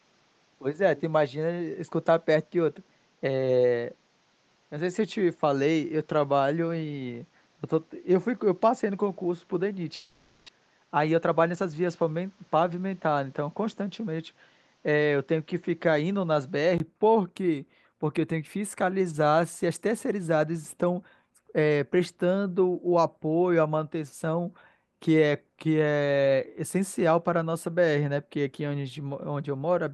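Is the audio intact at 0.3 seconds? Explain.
No. The input was likely switched to a poorer device from 0.0 to 16.8 s, so the band stops near 7.6 kHz, giving a duller, boxier speech sound with a faint added noise floor at much the same level, before a brief gap at 16.8 s restores it.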